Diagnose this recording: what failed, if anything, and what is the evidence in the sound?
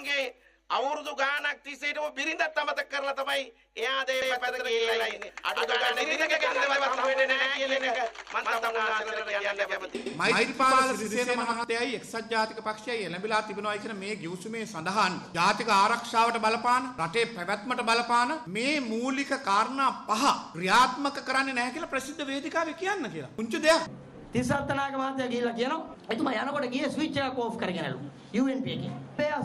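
Doubled audio track, 4.22–11.64 s: a dry, equal-level copy trails by about 100 ms with abrupt edges, likely from a second, slower capture path.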